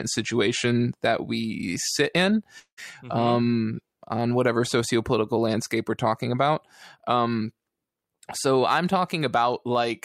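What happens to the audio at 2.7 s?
A likely long network dropout stopped audio arriving from 2.59 to 2.79 s, just after "that we sit in". The receiver continued the last sound as a buzz or hiss fading into 80 ms of silence, and speech resumes with 180 ms missing.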